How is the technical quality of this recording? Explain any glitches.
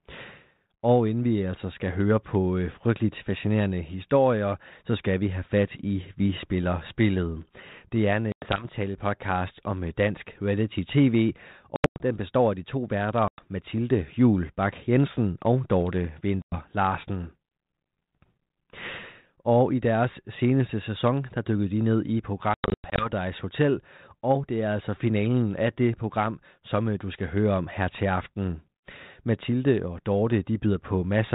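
The recording has five dropouts from packet loss on an ADPCM call, heard over telephone-band speech coded as 32 kbit/s G.726 ADPCM that cuts everything above 4 kHz. The dropouts fall at 8.32–8.65 s after "er en", 11.76–12.02 s before "den består af de", 13.28–13.42 s, 16.42–16.56 s and 22.54–23.11 s after "dykkede de ned i". Lost audio becomes hard-edged silence, up to 100 ms per hole, scattered in the longer events. The decoder's predictor and step size then lag the sender's, so speech resumes slightly distorted before settling.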